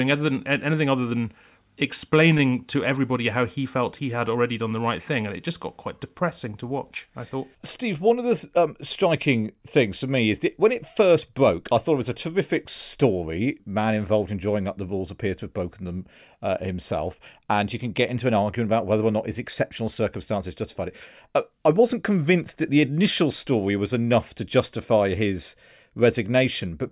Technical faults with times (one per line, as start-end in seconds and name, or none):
none